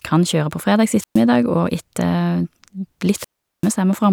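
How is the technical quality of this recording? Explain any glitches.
The recording has two audible wireless microphone squelch dropouts. The first runs from 0.96 to 1.23 s, just after "kan kjøre på fredags", and the second from 3.14 to 3.72 s. In each, the FM radio link fades until the receiver's squelch cuts the output. A brief swell of hiss or static comes first, then near silence lasting about 0.12 s and about 0.39 s respectively, before the speech returns. That rising hiss ahead of the gap distinguishes it from a clean digital dropout.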